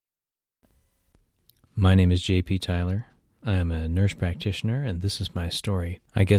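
Speech, with nothing technically wrong in it that can be heard.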